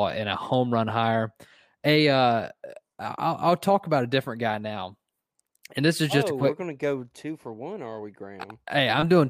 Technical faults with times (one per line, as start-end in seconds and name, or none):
none